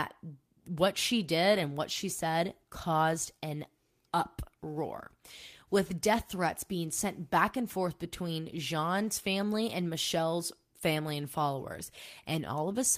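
Speech recording with no audible technical faults anywhere in the clip.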